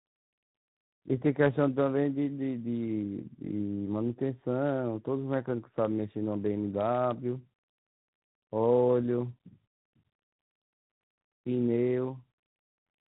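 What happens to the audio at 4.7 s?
At 4.7 s the speech is rough, muffled and warbly, with nothing above 3.8 kHz. Tandem speech coding throughout the clip causes it: G.726 re-encodes already degraded G.729A output passed on through G.711.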